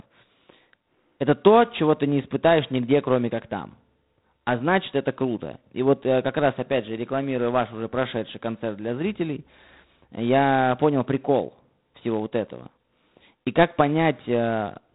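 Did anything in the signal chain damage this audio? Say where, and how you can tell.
Yes, at the codec stage, throughout: G.726 ADPCM. The speech carries a harsh, rasping hiss that rises and falls with its level, and nothing passes above 3.8 kHz. The coarse difference coding fits 24 kbit/s. Plain band-limiting would cut the top without this level-tracking grit.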